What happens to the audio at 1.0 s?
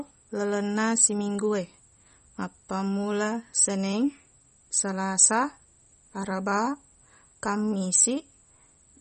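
The speech at 1.0 s carries the same MP3 compression damage heard throughout the clip, likely from a starved encoder, consistent with roughly 32 kbps. Nothing survives above 8.4 kHz, so a spectrogram shows a flat ceiling there, with weak components flickering on and off beneath it. The result is a plainly watery, swirly sound with smeared onsets.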